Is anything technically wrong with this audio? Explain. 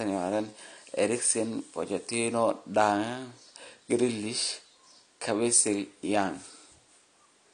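Yes. Throughout, the speech sounds dull and smeared, likely from AAC compression at a low bitrate near 32 kbps; a spectrogram shows a hard ceiling near 9.7 kHz.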